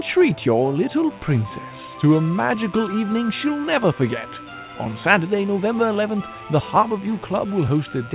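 From 1.11 s to the end at 8.15 s, a mains buzz sits well below the sound, roughly 30 dB down. Sharp switching spikes at twice 60 Hz give it a raspy edge rather than a smooth hum's pure tone, with harmonics climbing until the call path's 4 kHz ceiling cuts them off.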